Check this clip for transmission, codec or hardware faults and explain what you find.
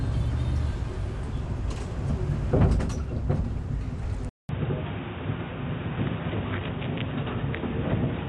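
Two faults are audible: codec damage across the whole clip, and a drop to a poorer input partway through.

Throughout, the audio has nothing above 11.5 kHz and plainly audible codec damage, likely from Dolby Digital compression at a bitrate around 64 kbps. Starved of bits, the encoder narrows the band and leaves many spectral lines to decoder dither, producing a dull, rough, fluttering texture.

At 4.29 s there is a 200 ms silence. After it, until the end, the band stops at 3.8 kHz and a new background noise sits about 35 dB below the signal, with the overall level about the same. This likely comes from the input switching to a poorer device, which makes the sound boxy and narrow.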